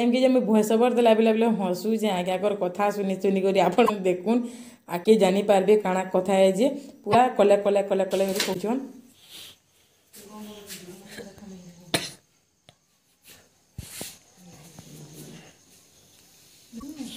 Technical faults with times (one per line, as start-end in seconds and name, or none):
3.85-3.90 broken MP3 bit reservoir
5.03-5.07 broken MP3 bit reservoir
7.12-7.15 broken MP3 bit reservoir
8.53-8.56 broken MP3 bit reservoir
16.79-16.83 broken MP3 bit reservoir